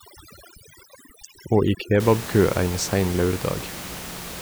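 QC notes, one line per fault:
0.0–2.0 s: overdone noise removal. Background drops and breaks up into twinkling specks, as aggressive spectral gating removes quiet speech bands along with noise.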